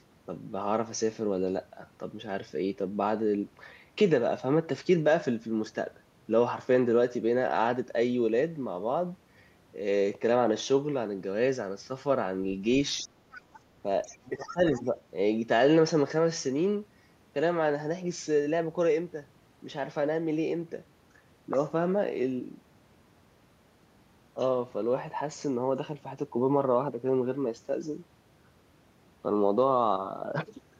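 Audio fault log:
12.98–13.02, 13.32–13.6, 14.02–14.18, 14.48–14.54 and 14.75–14.82 s: other side's voice leaking through. A second voice sits about 15 to 35 dB under the talker. The echo canceller likely missed loudspeaker pickup.
13.03–13.13 and 14.14–14.99 s: speech suppressed in double talk. The talker's level drops by up to about 15 dB while both sides speak. The canceller likely turned everything down at once.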